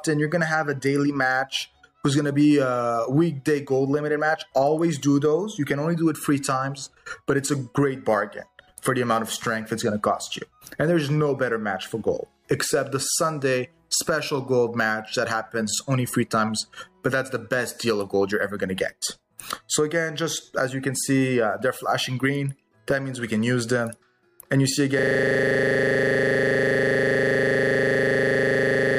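At 24.99 s the audio locks into a system hang loop that runs to the end: one 40 ms slice repeats about a hundred times, a 25 Hz buzz from a frozen system replaying its buffer. The waveform shows identical tiled segments, and the spectrogram shows evenly spaced vertical bands.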